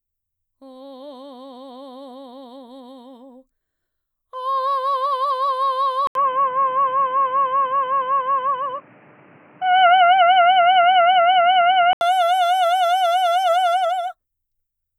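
At 6.07 s the music drops out for about 80 ms, then returns dull and boxy, with nothing above 3 kHz and a faint new noise floor sitting well below the signal, while the overall level stays about the same. This is an input switched to a poorer device, most likely a change to a narrower-band microphone or headset profile mid-recording. The restricted band and added noise persist until 12.01 s, when the full bandwidth returns.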